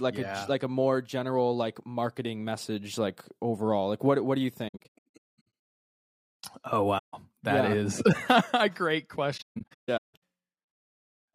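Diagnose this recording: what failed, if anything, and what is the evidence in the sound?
The failure is at the codec stage: AAC frame loss with muting. After "what what do you", the speech breaks into scattered holes from 4.68 to 5.45 s, with gaps of up to roughly a fifth of a second. A single 150 ms hole falls at 6.98 to 7.14 s, just before "that yeah is". After "a great", a second scattered patch runs from 9.37 to 10.22 s. The decoder zeroed each missing frame's spectrum, and the overlapping windows fade the sound out and back in, so the holes are soft-edged. On a spectrogram they appear as full-band vertical gaps with blurred edges. On a waveform they show as tapered envelope dropouts.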